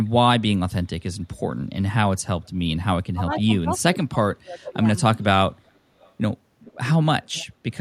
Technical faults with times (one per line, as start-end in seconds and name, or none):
3.14-4.85 speech suppressed in double talk
6.00-6.12 echo leak
6.65-6.77 echo leak
7.23-7.46 echo leak
7.72-7.77 echo leak